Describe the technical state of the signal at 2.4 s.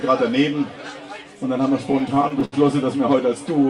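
At 2.4 s the audio is inside repeated stalls (stutter), spanning 1.89 to 2.54 s. Late packets emptied the jitter buffer nine times, and each gap, up to 72 ms, was filled by extending the previous sound. Nothing is lost, but playback drags and stutters. A spectrogram shows brief frozen, smeared stretches, and the waveform shows repeated segments fading through the longer gaps.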